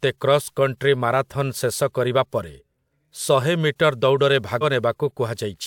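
Speech recording with compressed frames skipped near the end: at about 4.61 to 4.64 s the decoder dropped roughly one 42.7 ms frame of compressed audio, so the sound jumps ahead by around 40 ms.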